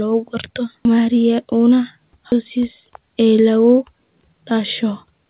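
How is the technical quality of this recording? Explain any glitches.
The recording has two timing glitches, both typical of a call, and the speech is band-limited to 4 kHz, consistent with a G.711 A-law telephone codec.

Skip ahead, from 2.32 to 2.34 s: a chunk of roughly a second of audio was discarded, either lost in transit or thrown out by the jitter buffer when it overflowed, while later audio was already queued. Nothing was inserted in its place, so the speech on either side is butted together almost seamlessly. You hear an abrupt forward jump, with roughly a second of speech simply absent.

Jitter buffer speed-up, from 4.22 to 5.26 s: the buffer was holding more audio than its target, so the receiver trimmed it by repeatedly cutting out tiny slices, each one or a few pitch periods long. Around a tenth of a second was removed this way. The result is the closing stretch playing at about 109% speed with its pitch unchanged, which makes the end of the clip sound rushed.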